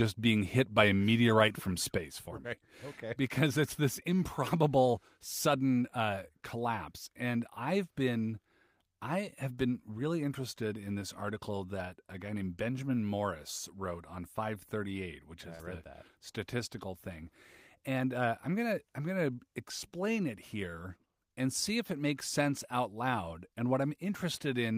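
At 1.98 s the level drops suddenly by about 6 dB and stays there to the end. Sound and background noise fall together, in one step. This is a sudden gain jump. The likely cause is a digital gain change applied without a ramp.

At 15.55 to 15.61 s there is short concealed packet loss. About 40 ms of audio never arrived in time. The receiver filled the gap by extending the preceding sound, then blended back. It is heard as a brief smear.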